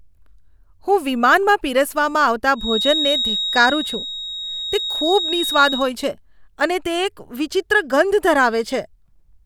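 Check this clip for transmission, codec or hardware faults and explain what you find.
There is one fault, a feedback whistle, from 2.53 s to 5.92 s. A thin, steady tone at 3.8 kHz sits just under the speech, only a little quieter than the talker, and swells and fades slowly in level without growing or dying away. The likely cause is a loudspeaker-to-microphone loop held right at its feedback threshold. At that single frequency the loop gain is close to one, so the tone keeps sounding on its own but never runs away into a howl.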